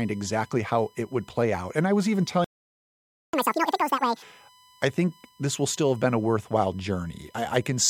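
Current drawn in 1 ms USB frames is leaking into the audio through the power or ground path, producing USB whine: a steady, fixed-pitch tone at 1 kHz sitting about 35 dB below the speech and running under the whole clip.

At 2.44 s the player likely ran out of buffered data or had its thread blocked, causing a playback stall. The output drops to silence in mid-flow for about 890 ms, until 3.33 s, before the sound resumes from where it stopped.

From 3.33 s to 4.22 s the player works through its backlog with catch-up at higher speed, resampling to twice normal speed. The speech rushes by noticeably raised in pitch, around ten semitones up, then settles back to normal speed and pitch.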